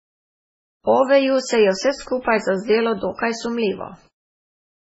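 Throughout the speech there is heavy MP3 compression damage: nothing is heard above 7.7 kHz, and the sound is watery and swirly, with metallic chirps on s sounds and smeared attacks. This is likely a very low bitrate, around 16 kbps, forcing the encoder to drop treble and zero weak frequency lines frame by frame.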